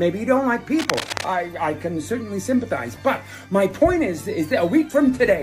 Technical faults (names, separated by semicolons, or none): cable scratch noise